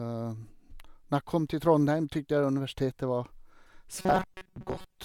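From about 3.99 s right through to the end, the speech turns into a robotic buzz from repeated short buffers. It has a stiff metallic drone pitched near 188 Hz, still loosely following the shape of the words. That pitch fits a chunk of roughly 5.3 ms being replayed over and over, likely because fresh audio wasn't arriving in time, so most of that stretch is repeats rather than the real signal.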